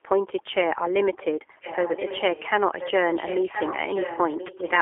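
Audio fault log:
throughout G.729 codec: the sound is confined to roughly 300 Hz to 3.4 kHz and is plainly rough and synthetic, as expected when speech is rebuilt from a filter, a pitch predictor and a few pulses, which fits an 8 kbit/s G.729A stream. On a spectrogram, energy stops sharply near 3.4 kHz, with smeared harmonics below.
1.61 to 2.49 s, 2.72 to 2.92 s, 3.1 s to end: echo leak. A second copy of the speech trails about 1.03 s behind, roughly 10 dB quieter, likely from a loudspeaker-side echo canceller that let its microphone pickup through. A spectrogram shows faint duplicated harmonic patterns shifted about a second later.
4.47 to 4.54 s: VoIP packet loss concealed by the speech codec. About 20 ms of audio goes missing, which fits one lost packet. The decoder extrapolates from the last pitch and filter into a brief buzzy tone or coloured noise that fades, and the speech stays weak afterwards. 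The waveform shows a short, decaying stretch.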